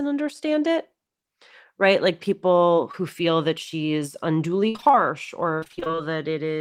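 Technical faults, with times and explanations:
2.91 to 2.95 s, short concealed packet loss: about 20 ms of audio arrived too late, so the decoder stretched the previous sound over the hole, leaving a quick smear.
4.69 to 4.95 s and 5.60 to 6.00 s, repeated packet loss (robotic sound): holes keep coming, with about half of each stretch patched, giving that choppy, robotic texture.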